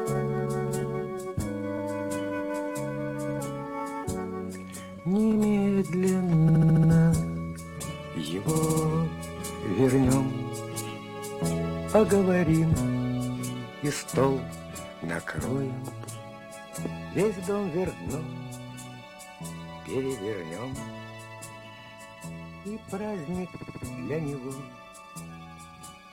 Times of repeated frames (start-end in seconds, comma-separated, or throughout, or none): 1.77-1.81, 6.48-6.90, 8.55-8.83, 21.78-21.92, 23.55-23.83